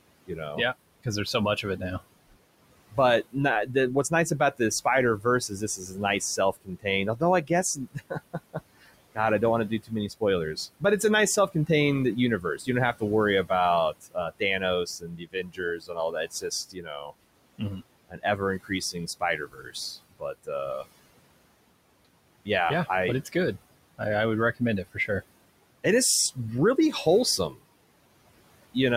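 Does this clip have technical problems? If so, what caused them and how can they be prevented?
Yes. Noise suppressor artifacts run through the whole clip: the suppressor pulls the room noise, which sits about 18 dB below the speech, down by about 21 dB in gaps, then lets it back under the voice. Using a gentler suppression setting, or a quieter room, would prevent this.

Speech cut by the noise suppressor occurs at 0.26–2.0 s, 2.9–4.6 s, 5.2–10.83 s, 12.41–20.86 s, 22.45–25.1 s and 25.84–27.65 s. The suppressor mistook quiet speech for noise and dropped it by about 16 to 22 dB. The losses are brief in most spans, but total over a second in the third and a few seconds in the fourth, so endings and soft sounds fade. Lowering suppression strength or placing the microphone closer would prevent this.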